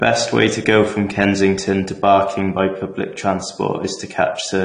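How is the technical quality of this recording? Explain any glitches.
The recording is plainly degraded by lossy compression throughout. AAC compression, throughout: nothing above 10 kHz, likely from AAC-LC quantising frequency lines coarsely at a low bitrate, fitting roughly 32 kbps, leaving the speech dull, smeared and warbly.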